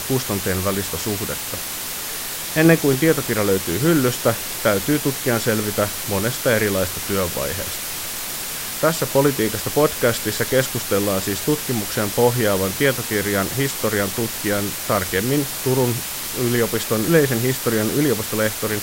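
From start to finish, the speech carries low bit depth with dither. Rounding to very few levels, which fits about a 5-bit word length, turned the error into steady white noise. The result is a constant, even hiss nearly as loud as the speech, without distortion.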